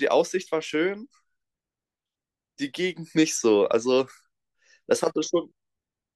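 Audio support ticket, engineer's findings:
No faults found on listening; the speech comes through without any audible dropouts, glitches or distortion, so there's nothing to chase here.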